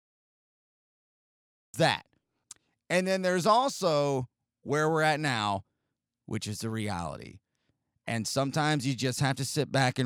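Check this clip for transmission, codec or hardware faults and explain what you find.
There is one fault, a cut-off start. The capture or stream began late: nothing of the original sound was recorded before it opened, so the first 1.74 s are digital silence and the speech enters abruptly at 1.74 s, already in progress. Because the cut falls mid-sound rather than at a pause, there is no natural attack or build-up. The speech switches on at full level, as though its opening had been sliced away.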